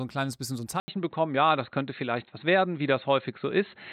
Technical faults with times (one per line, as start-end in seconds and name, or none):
0.80-3.93 input switched to a poorer device